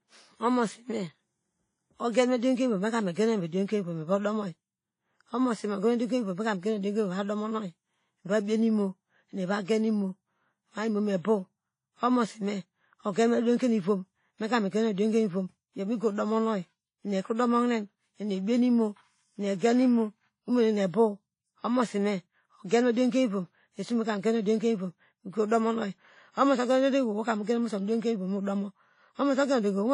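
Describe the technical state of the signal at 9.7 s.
A short burst of hiss runs from 9.64 to 9.68 s, about 42 ms, just before an attack that sounds softened and smeared. This is pre-echo: the codec spreads noise sized for the loud onset across its whole block, filling the quiet moment ahead of it.

Underneath, the speech sounds washy and ringing, with a hiss that breathes along with it and nothing above 10.1 kHz. The likely cause is WMA compression at a rate that fits about 32 kbps.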